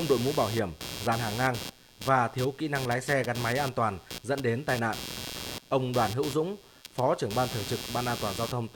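Computer activity noise runs throughout: processor and graphics load shifts the shared audio ground, adding a buzzy chirping near 150 pulses per second, only around 10 dB below the speech.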